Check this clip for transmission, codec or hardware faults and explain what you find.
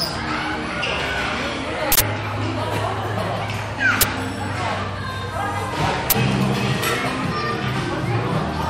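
Three uninitialised buffer bursts: 1.92–2.01 s (85 ms, fitting a 4096-sample block), then 4.01–4.03 s and 6.10–6.12 s (21 ms each, fitting 1024-sample blocks). Unwritten buffers were played, so leftover memory came out as loud bursts of digital noise.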